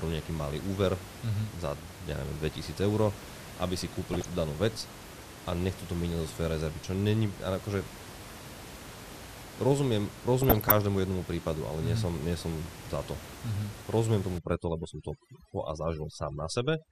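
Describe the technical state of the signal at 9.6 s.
At 9.6 s the speech carries MP2 compression damage, as it does across the whole clip. The sound is dull and topped off, with a gurgling, granular roughness. This is likely the result of MPEG Layer II coding at a rate that fits about 80 kbps. The codec divides the signal into 32 sub-bands and allots bits to each. At this budget it starves the upper bands, so they drop out and flicker back, while the remaining bands are quantised coarsely. The room noise sits about 15 dB below the speech.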